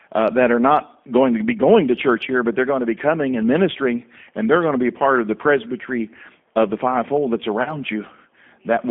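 Throughout the speech runs through the G.729 codec, which carries it at 8 kbit/s by rebuilding each 10 ms frame from a vocal tract filter, a pitch predictor and a few coded pulses. The damage is plainly audible as a rough, slightly synthetic edge on the speech. The line passes only about 200 Hz to 3.5 kHz, so a spectrogram shows energy ending abruptly near 3.5 kHz, with a thin floor below 200 Hz.

From 7.63 to 7.78 s comes VoIP packet loss concealed by the speech codec. About 30 ms of audio went missing, which fits a single lost packet, and the decoder filled the gap by extending its last pitch and filter with falling gain. That gives a brief stretched sound that fades, and the speech stays weak until about 7.78 s while the decoder recovers. On a spectrogram the harmonics flatten into unchanging horizontal bands, and the waveform shows a repetitive envelope that sags and then builds back up.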